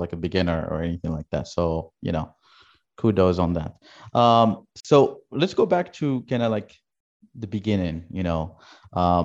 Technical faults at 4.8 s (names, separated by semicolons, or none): gap at a join of encoded pieces